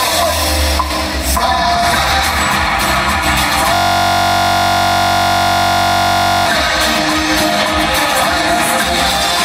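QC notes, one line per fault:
3.74–6.46 s, system hang loop: a steady buzz at about 46.9 Hz replaces the audio for nearly 2.7 s. The playback side stalled while the hardware kept replaying the same 21.33 ms piece of its ring buffer, which fits a 1024-sample buffer, well over a hundred times. This is not mains hum or a tone, because the buzz carries the texture of that frozen slice. It is not a stutter either, because the loop is too short to hear as separate repeats.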